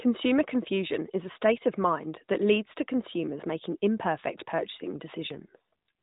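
Near the end of this speech clip, from about 5.30 to 5.89 s, there's an AMR rate drop. The band stays narrow, capped at 4 kHz as on the rest of the mobile call, and there's no gap. For that roughly 0.6 s stretch, the speech turns rougher, buzzier and more synthetic. That sound points to the network pushing the codec from its 12.2 kbps mode down to about 5.9 kbps, putting the freed bits into error protection on a weak radio link.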